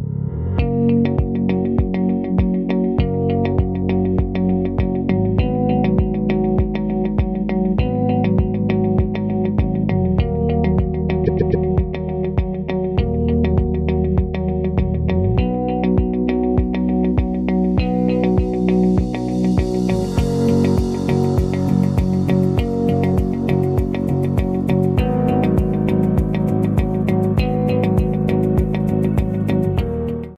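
At 11.25 s there's a stutter from repeated frames. A chunk of about 130.6 ms gets played, then comes back three more times before things move on at 11.64 s. The compressed stream carried that same stretch more than once, and the length fits a run of five frames. The whole thing ends up 391.8 ms longer.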